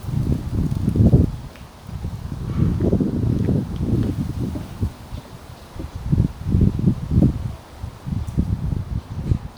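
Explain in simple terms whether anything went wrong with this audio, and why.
There's a small glitch from overlapping chunks: at 1.91 s and again at 4.91 s you get a quick click where about 6.5 ms of sound plays twice. The audio was handled in 3-second pieces, and each piece started slightly before the previous one finished.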